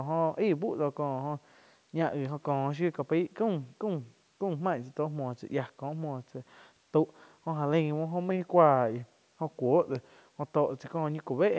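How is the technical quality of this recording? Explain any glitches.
One glitch stands out in this speech recording, which passes through call microphone processing that leaves nothing above 8 kHz. A drift correction step runs from 8.31 to 10.45 s, likely clock-matching software cutting playback speed about 5.5% to rebalance its buffer. The voice drops nearly a semitone for that span.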